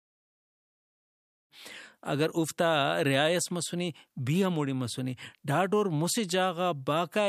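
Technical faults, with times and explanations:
No faults found; the speech level ramps in smoothly from about 1.5 s to 1.54 s with no click or hard edge.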